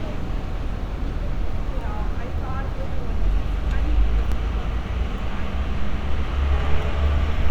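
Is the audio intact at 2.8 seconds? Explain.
Yes, the sound at 2.80 s is intact, with no dropout, click, distortion or other fault at that point.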